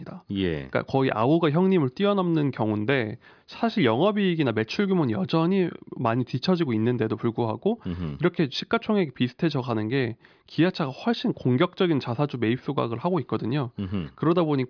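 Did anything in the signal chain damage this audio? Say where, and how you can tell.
No, nothing in the chain seems to have damaged this speech recording, and there's nothing to point at anywhere along it.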